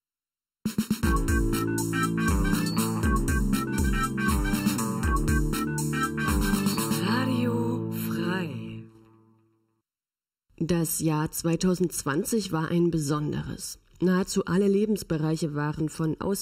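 Throughout the clip there is channel delay with comb filtering. One channel lags the other by well under a millisecond, and summing them cancels shared content at evenly spaced frequencies, the first near 700 Hz. The hollow, phasey colour stays fixed, unlike a sweeping flanger.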